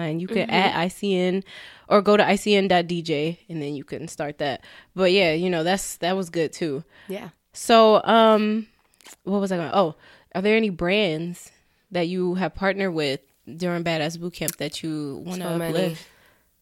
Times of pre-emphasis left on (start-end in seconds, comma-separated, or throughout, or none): 12.80-16.62